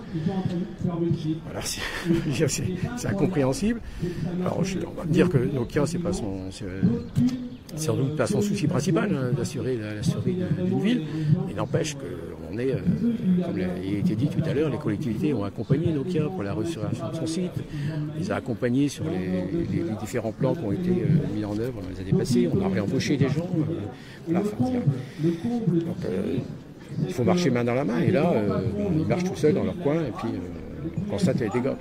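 At 15.11 s the sound briefly smears into a noisy, phasey patch that lasts until about 15.18 s, with no dropout to silence. This is AAC frame loss with concealment. About 43 ms of coded audio, consistent with a single lost frame, never reached the decoder. The decoder rebuilt the gap from the last good spectrum, scrambling phase and carrying over its energy. The loss was too short for that patch to fade into silence.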